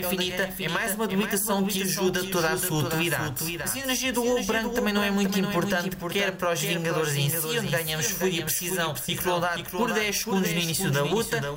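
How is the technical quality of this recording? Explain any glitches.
The recording has one clear problem running its full length.

Doubled audio track, throughout: a full-band copy trails about half a second behind, roughly 5 dB quieter, likely from a second, slower capture path, so every sound repeats without any room decay.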